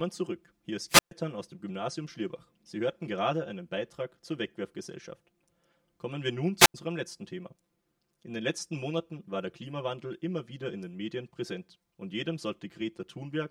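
From the first moment to the end, the speech sounds hollow and phasey, with a fixed coloration that never moves. This is channel delay causing comb filtering: one channel arrives roughly 5 ms behind the other, and when the two are summed to mono, content common to both cancels at evenly spaced frequencies. The first notch sits somewhere near 100 Hz, with further notches repeating up the spectrum.

At 0.88 s a short burst of hiss rises, then the sound drops into a hole of near silence lasting about 130 ms before returning at 1.11 s. The same thing happens again from 6.58 s to 6.74 s, this time with a mute of about 90 ms. Both are wireless microphone squelch dropouts: the analogue FM signal fades far enough that the receiver's squelch cuts the output, leaving static and then a gap before the signal recovers.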